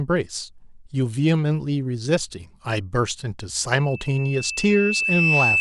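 From 3.77 s to the end, loudspeaker feedback squeal: a 2.6 kHz tone swells over roughly a second and a half, the mic-speaker loop exceeding unity gain, finishing about 5 dB above the speech.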